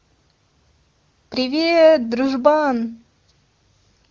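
This speech recording carries no technical faults, and its wideband telephone-style coding sounds consistent with the top AMR-WB mode of about 24 kbit/s, with any coding trace at most faint.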